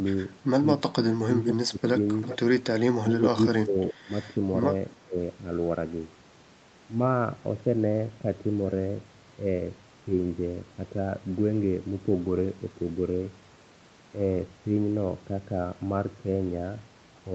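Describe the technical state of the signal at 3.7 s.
At 3.7 s the speech is caught in a dip from 3.63 to 4.1 s, most likely speech suppressed in double talk. With both ends talking, the echo canceller seemingly mistook this talker for echo and ducked it, by about 20 dB at worst, for roughly a third of a second in total.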